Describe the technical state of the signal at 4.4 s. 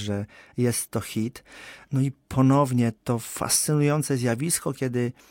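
At 4.4 s the speech carries clock slip clicks, faint ticks about once a second from 0.85 to 4.63 s, likely from two unsynchronised clocks roughly 20 ppm apart dropping or repeating single samples.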